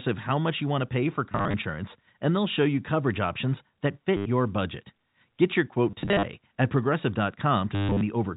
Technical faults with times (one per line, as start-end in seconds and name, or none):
1.32-1.54 packet loss with last packet repeated
4.17-4.26 packet loss with last packet repeated
5.91-6.23 packet loss with last packet repeated
7.75-8.01 packet loss with last packet repeated